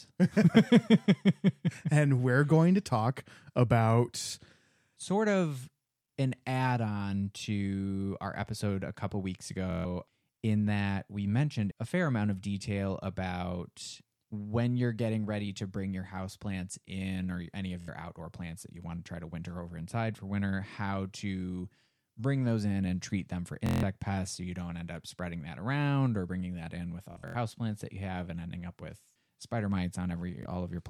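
Bluetooth stutter hits at 9.71–9.85 s (after "episode a couple weeks"), 17.81–17.88 s, 23.66–23.83 s, 27.12–27.35 s in scattered bursts, and 30.43–30.46 s. Lost or late packets make the receiver replay its last short buffer, producing a buzzing machine-gun judder, then speech resumes further along.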